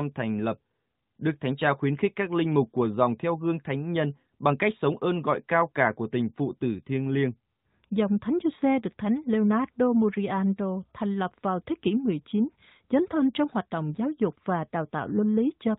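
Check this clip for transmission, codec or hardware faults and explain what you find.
No transmission, codec or hardware faults are audible here.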